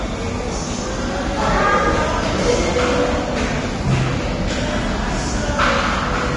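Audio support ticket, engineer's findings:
Hissy, grainy sound throughout, smeared attacks, nothing above 10.6 kHz. Likely Vorbis compression at a low bitrate around 31 kbps: coarse treble quantisation turns fine detail into noise.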